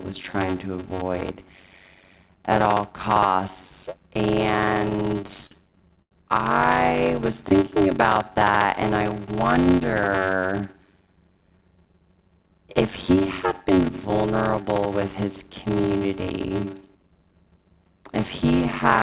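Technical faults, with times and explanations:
Throughout: block size mismatch (padded). A steady buzz near 93.8 Hz sits under the speech, which fits 512-sample blocks at 48 kHz only partly filled, about 320 samples each, with zeros. The speech runs at 0.625 times normal speed but keeps its pitch, unlike a sample-rate error.
4.9 to 6.12 s: repeated stalls (stutter). The jitter buffer kept running dry, so the receiver held the last sound through 13 short waits, about 248 ms in all, the longest 89 ms and faded. Nothing is lost, unlike dropouts; the speech just drags and catches.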